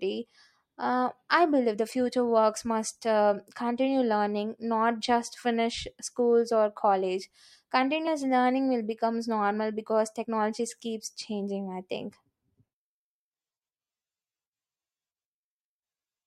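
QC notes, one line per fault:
8.06 s (just before "learning will becomes normal") and 10.23 s (between "will becomes normal because" and "keeps changing I think"), compressed frames skipped: speech jumps ahead roughly 50 ms, fitting about two lost 26 ms frames. Overlapping frames smear the join into a soft blip, not a click. The spectrogram shows a brief blurred vertical smudge with no sharp transient.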